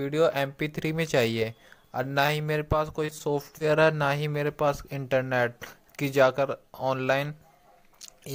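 At 2.26 to 2.30 s there is short concealed packet loss. About 20 ms of audio never arrived, and the receiver covered the gap by extending the preceding sound before blending back in. It is heard as a brief smear or wobble, and whatever fell in that 20 ms is simply gone.

The same fault returns at 3.06 to 3.15 s. Again 20 ms is missing, but the patched stretch runs slightly longer, roughly a few milliseconds beyond the loss, so the join smears over a wider span.

Right after, at 3.18 to 3.22 s, comes a short stall from a late packet. Here the jitter buffer ran dry and the last sound was held for about 20 ms until the packet turned up, then playback resumed from the same point. What separates it from the losses is that nothing is dropped. A sound is drawn out with a faint buzz or dip, and everything after it lands about 20 ms later.

A final short concealed packet loss at 3.58 to 3.62 s removes another 20 ms, filled with about 22 ms of synthetic continuation, giving the same brief wobble as the earlier two.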